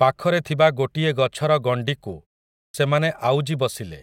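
At 2.67 s, after a pause of about 0.49 s, the speech resumes with a clipped start: the output woke late and swallowed roughly 73 ms, so the sound snaps in without its onset. Unlike muted pauses, which silence only the gap, this loses speech itself.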